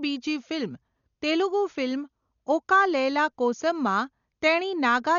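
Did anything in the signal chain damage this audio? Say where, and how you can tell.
Yes, at the codec stage. Throughout the speech nothing reaches above 7 kHz, and the remaining band is heavily damaged, dull and coated with a rough, fluttering noise that clings to voiced tones. The likely cause is Dolby Digital compression at a rate near 48 kbps. Starved of bits, the encoder narrowed the band and left many frequency lines empty, which the decoder filled with dither noise. A plain low-pass filter would cut the top without adding that grainy flutter.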